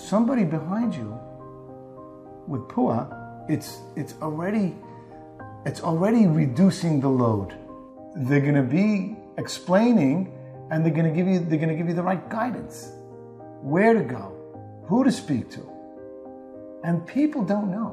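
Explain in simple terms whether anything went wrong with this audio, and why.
Nothing went wrong here; there's no fault anywhere that a listener would pick up on.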